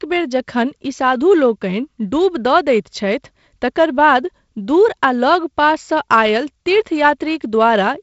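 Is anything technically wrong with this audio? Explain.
No, nothing is technically wrong: the speech comes through G.722 wideband telephone coding at a rate that sounds like 48 kbit/s, with the light coding noise that mode leaves and no content above about 7.7 kHz.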